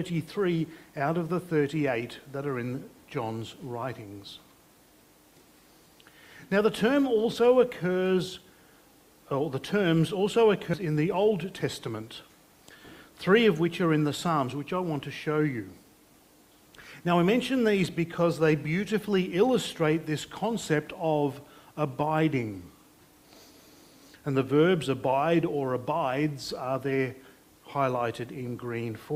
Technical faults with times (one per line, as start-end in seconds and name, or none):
10.73-10.75 skip ahead
11.30-11.90 jitter buffer speed-up